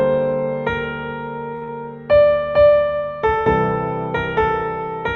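At 1.55 s a short stall from a late packet holds the sound for about 64 ms, until 1.63 s. A packet arrived too late, the jitter buffer ran dry, and the receiver stretched the last sound until the packet arrived. Playback then resumed from the same point, so nothing is lost. Instead, everything after it lands 64 ms later than it should. This is heard as a held sustain with a slight buzz or dip rather than a gap.

Right after, from 1.64 to 1.69 s, comes short concealed packet loss. About 40 ms of audio never reached the decoder, and the receiver covered the hole with 44 ms of synthesized continuation before blending back into the real signal. Unlike the stall just before it, this material is actually gone. What remains is a brief smear or wobble in place of the original sound, not a held stretch followed by intact audio.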